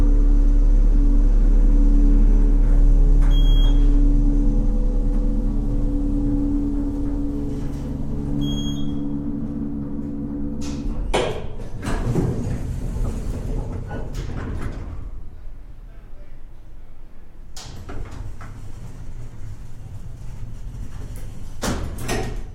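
Nothing here trips up the listener: there are no dropouts, glitches or other technical faults anywhere in this recording.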